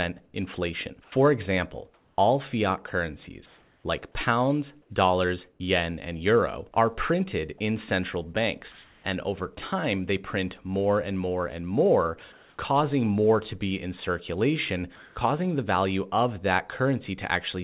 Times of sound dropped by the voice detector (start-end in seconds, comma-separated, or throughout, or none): 6.74